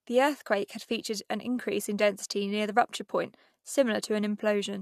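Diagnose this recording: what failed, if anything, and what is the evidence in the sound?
Nothing in this speech recording points to a failure at any stage, from capture through to playback. No moment in the sound carries evidence of a fault, so there is no stage to single out.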